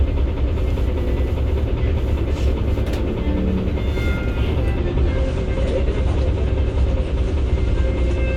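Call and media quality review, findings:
Treble cut to nothing above 9.6 kHz, with swirly codec artefacts, from 4.78 s to the end. No gap at the switch. Adaptive stream at a lower bitrate, fits AAC near 32 kbit/s.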